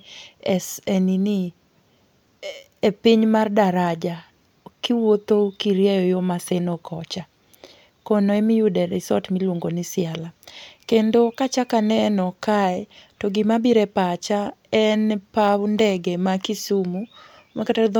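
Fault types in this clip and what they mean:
No fault types are present in the clip.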